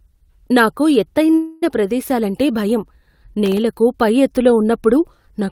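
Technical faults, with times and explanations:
1.31–1.35 s, short stall from a late packet: a sound is held on for about 16 ms longer than it should be, with a faint buzz or dip where it ought to move on. A packet arrived late, the jitter buffer ran dry for that moment, and the receiver stretched the last bit of audio to bridge the wait. Once the packet turned up, playback resumed exactly where it had stopped, so nothing is lost, only delayed by those 16 ms.
1.35–1.64 s, call audio freeze: straight after that stall, the sound hangs for about 0.27 s as a continuing buzz or hiss that never drops to silence, then the speech picks up again where it left off. This is likely packets held up in transit, leaving the jitter buffer empty while the receiver kept extending the last sound. No audio is missing. A gap of about 271 ms has been inserted, and the stream now runs that much later than before.
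3.46–3.58 s, processor overload crackle: a short burst of gritty crackle rides on the speech for just over a tenth of a second. The processor fell behind on very small audio buffers, in the region of 0.7 ms each, and missed around five of them. Each missed one came out as a sliver of silence with abrupt edges, and those hard-edged dropouts clustered together are heard as tearing rather than as separate clicks.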